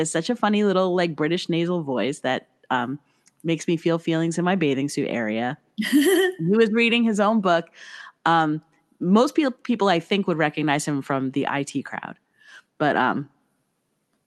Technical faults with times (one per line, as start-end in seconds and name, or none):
none